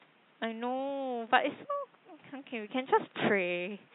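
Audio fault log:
No faults heard.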